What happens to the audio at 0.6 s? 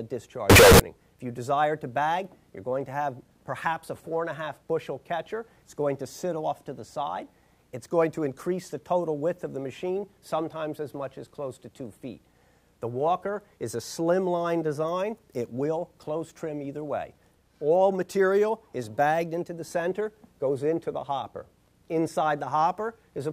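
At 0.6 s the audio hits a float read as integer fault, from 0.50 to 0.80 s: 32-bit float samples were likely read as 32-bit integers. The sign and exponent bits then dictate each value, so the waveform turns nearly square at an almost fixed, high level, sounding very loud and harsh.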